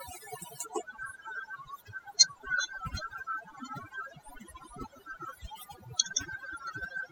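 From start to finish the speech carries overdone noise removal: a noise reducer set too aggressively pulls individual frequency bands down or out wherever they sit near its noise estimate. The background drops and breaks up into twinkling specks, and quieter voice components vanish.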